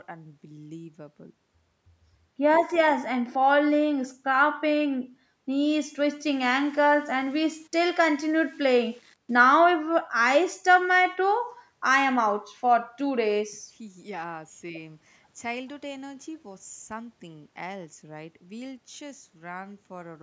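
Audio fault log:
6.31 to 9.43 s: low bit depth without dither. For this stretch the speech is likely reduced to about 8 bits and rounded to the nearest step with no dither to break up the error. Because the rounding error tracks the waveform instead of sitting as a steady hiss, it comes through as a grainy, rasping distortion about 35 dB below the speech that changes with every syllable, coarsest on the quieter parts and on trailing sounds as they fade toward the smallest steps.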